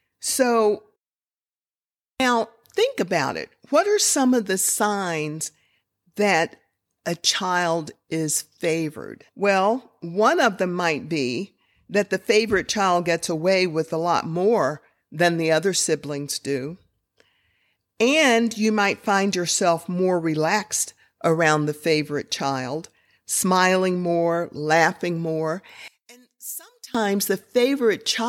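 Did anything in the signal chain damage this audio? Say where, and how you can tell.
Yes: from 25.88 to 26.95 s the speech collapses to a faint residue about 19 dB quieter, likely one channel inverted in the analogue wiring, cancelling on mono summing.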